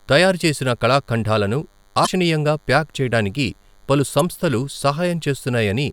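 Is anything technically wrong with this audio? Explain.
Yes, there are two problems.

A DECT cordless phone buzz runs throughout: a thin 100 Hz buzz rich in harmonics, roughly 40 dB below the speech. A nearby handset's 10 ms radio bursts are rectified by the audio circuitry.

Damaged data in a compressed stream appears from 2.03 to 2.08 s, between "తయారు చేసిన కళఖండాలను" and "ప్యాక్ చేయడానికిగా పలు", and again at 4.19 s, just after "ప్యాక్ చేయడానికిగా పలు". Corrupt frames throw the decoder out of sync, leaving brief squawks or blips.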